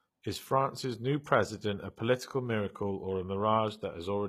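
Throughout, s sounds turn gritty and lispy while treble stays bright, unlike a dull lowpass; likely HE-AAC compression, its replicated treble fitting about 20 kbps.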